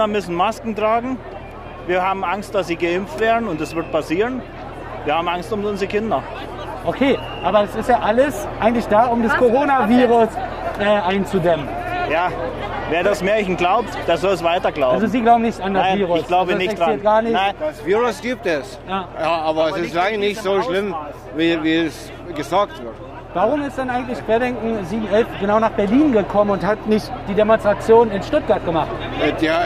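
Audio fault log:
No faults detected in this clip.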